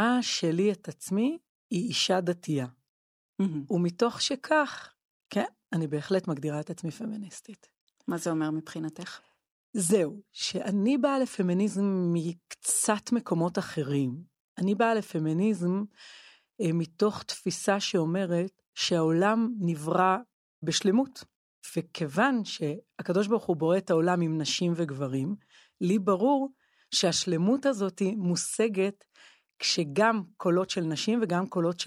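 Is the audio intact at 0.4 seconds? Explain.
Yes, at 0.4 seconds the audio is intact, with no dropout, click, distortion or other fault to be heard at that moment.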